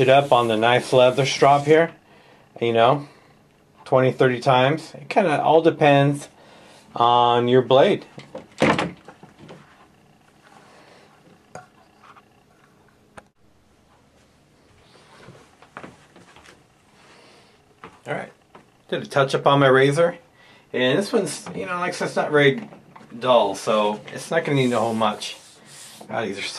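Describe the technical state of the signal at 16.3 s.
At 16.3 s the signal is intact, with no dropout, distortion, glitch or other technical fault at that point.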